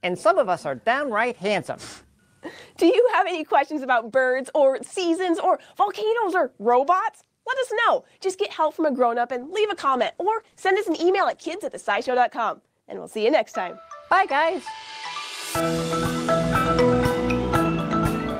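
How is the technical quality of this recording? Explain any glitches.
One glitch stands out: a call bitrate drop from 9.37 to 12.27 s. The bandwidth estimate fell, so the encoder coded more coarsely and trimmed high frequencies, leaving the sound rough and muffled for about 2.8 s. The degradation fits a fall from roughly 48 to 18 kbps. Unlike packet loss, the sound never breaks up or goes silent.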